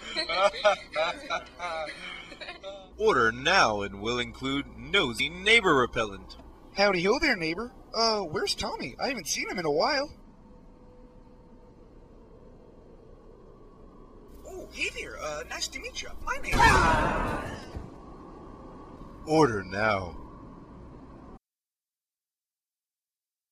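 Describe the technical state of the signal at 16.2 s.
At 16.2 s the signal shows damaged data in a compressed stream, running from 16.18 to 16.23 s, roughly 40 ms. A short run of the encoded bytes is corrupt there, so the decoder cannot parse the affected frames correctly. It loses frame sync and scans forward until it finds a valid header. Audibly this comes through as a brief, harsh chirp or blip that breaks the continuity of the sound before clean decoding resumes.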